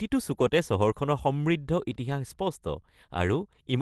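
Nothing goes wrong anywhere in this speech clip; it simply sounds like ordinary audio carried over a WebRTC call using the Opus codec.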